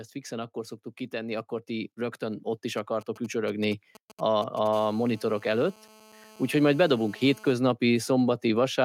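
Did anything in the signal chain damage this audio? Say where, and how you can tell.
Yes. Two stages left their mark on this speech.

Automatic gain rising, in call processing: from 0.28 to 2.51 s the level climbs by about 5 dB, and again from 5.95 to 6.8 s by about 4 dB. The AGC judged the input too quiet and raised its gain slowly, so the voice and the background noise swell together. A waveform shows the envelope widening across each span, with the noise floor between syllables lifting by the same amount.

GSM signalling bursts, in the analogue wiring: from 2.78 to 4.68 s there is a galloping dit-dit-dit of short buzzes at about 217 Hz, roughly 20 dB below the speech. A nearby 2G phone was sending brief groups of radio bursts while signalling, and the audio circuit rectified them. On a spectrogram they appear as clustered vertical stripes with a harmonic comb at 217 Hz spacing.

GSM phone buzz, also in the analogue wiring: from 4.73 to 7.52 s a hard, raspy 217 Hz buzz runs continuously, about 27 dB under the speech and unrelated to it. 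This is a nearby 2G phone transmitting steadily in a call, its 217-per-second pulses rectified into audio. A spectrogram shows unbroken horizontal lines at 217 Hz and its many multiples. The waveform carries a regular pattern repeating every 4.6 ms beneath the speech.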